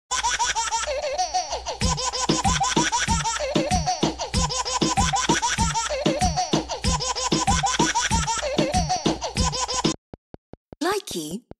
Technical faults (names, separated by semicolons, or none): train of clicks